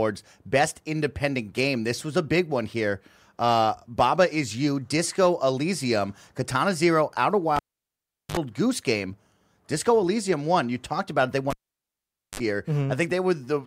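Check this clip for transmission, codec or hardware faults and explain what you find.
The speech has a hardware fault: a cable pulled and plugged in, twice. At 7.56 to 8.37 s and 11.50 to 12.40 s, a live cable leaves its socket. A pop gives way to near silence for about 0.76 s and 0.84 s. A brief 50 Hz mains buzz sounds while only the plug tip touches. Another pop follows as the sound returns.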